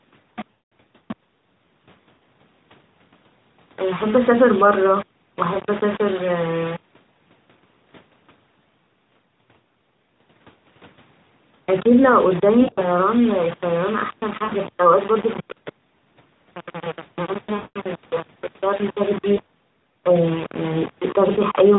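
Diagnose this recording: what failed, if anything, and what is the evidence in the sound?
A sample-format conversion stage has failed. The whole recording carries a coarse, grainy distortion that moves with the speech: quieter syllables sound gritty, and quiet passages break up into rough steps instead of a steady hiss. The error sits roughly 15 dB below the signal, which fits a signal likely rounded to about 4 bits with no dither. This is low bit depth without dither rather than codec damage or background noise, because the grit rises and falls with the speech instead of forming a constant noise floor or a swirling warble.

The network stage failed too, producing lost AMR speech frames. The gaps fall at 0.52–0.72 s, 2.18–2.21 s, 5.54–5.59 s, 12.62–12.86 s, 14.44–14.55 s, 17.56–17.79 s, 19.36–19.40 s and 21.32–21.41 s. The single 20 ms losses come through as brief dips or warbles. The 200 ms runs at 0.52 s and 17.56 s stretch the last sound and let it fade before the speech returns weak. 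At 12.62 s, 120 ms of loss is scattered over 200 ms, with the longest run 60 ms. Unlike a dropout of silence, these gaps show the decoder concealing the loss by repeating the last good sound with falling gain.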